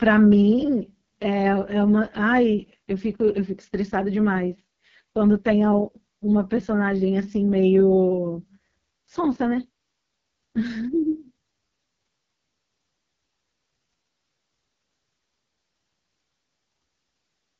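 From start to finish the speech carries the sound of the AMR wideband (HD Voice) codec, and at its harshest. Nothing reaches above 7 kHz, and the voice comes through rough and raspy, which fits the lowest 6.6 kbit/s mode. The coder models speech as pulses through a vocal tract filter, and at this rate that model is too coarse to hold a natural tone. The 7 kHz ceiling sets it apart from narrowband phone coding, which stops near 3.4 kHz.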